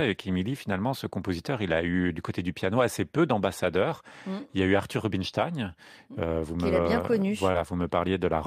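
At 7.51 to 7.55 s, just after "vous me bien connu", short concealed packet loss replaces about 20 ms of lost audio with a brief smear.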